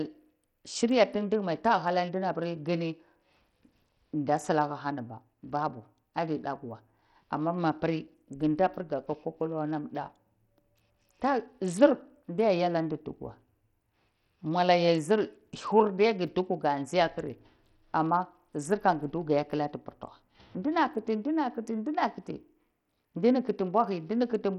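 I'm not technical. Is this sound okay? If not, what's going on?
No. The speech has a gritty, grainy edge from start to finish. The crisp high sounds thin out and flicker. This is Bluetooth SBC compression, likely from a wireless link. It squeezes the sound hard, so the treble gets too little detail.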